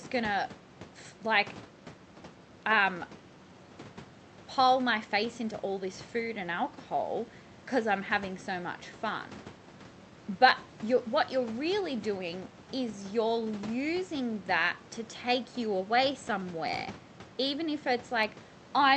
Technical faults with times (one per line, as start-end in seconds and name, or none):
none